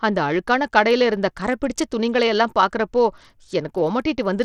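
From start to finish, the speech has most likely passed through Bluetooth SBC compression at a starved bit allocation, with a damage level that fits a link running near 80 kbps. With so few bits, the upper sub-bands get little or nothing while the lower ones are coarsely quantised. The result is plainly audible throughout: treble that thins out and flickers in and out, and a gritty, grainy noise with aliasing clinging to the speech.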